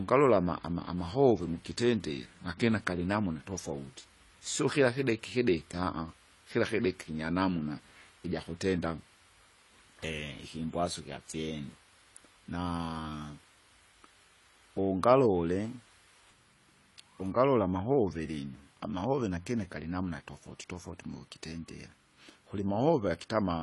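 From the start and throughout, the speech is dull and smeared, with a fizzy, warbling edge on sibilants, likely from AAC compression at a low bitrate, which fits about 32 kbps. On a spectrogram nothing appears above 11.5 kHz.

From 2.25 to 2.84 s, a drift correction step slows playback by about 5.5% for 0.59 s, dropping pitch nearly a semitone (about 97 cents). This is likely a clock-matching rate change. On a spectrogram the harmonics visibly step down.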